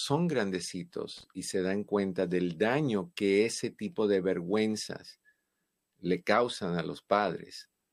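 Speech with a short loose connector crackle from 1.17 to 1.24 s, just before "y se dan cuenta": an irregular burst of scratchy crackle as a worn contact makes and breaks, chopping the signal. Its ragged, uneven texture separates it from a single clean click or a digital dropout.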